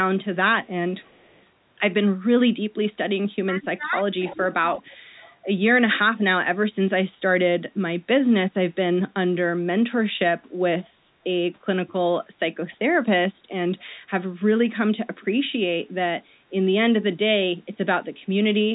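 From 0.35 to 1.45 s there's an echo leak: a faint copy of the speech, about 35 dB down, trailing 327 ms behind. It's most likely a loudspeaker on the far side whose echo canceller didn't fully remove it.

Between 3.43 and 4.93 s the speech is suppressed in double talk, dipping by up to about 15 dB in pieces adding up to roughly 0.7 s. The likely cause is the canceller ducking everything while both sides talk at once.

Overlapping that, the echo comes back much louder, about 15 dB down, at 4.24–4.38 s and 4.73–5.36 s. After that it only returns in short scraps, at 11.88–11.93 s (about 30 dB down) and 13.79–13.83 s (about 40 dB down). Between those two scraps there's one more brief dip of about 10 dB at 12.73–12.77 s.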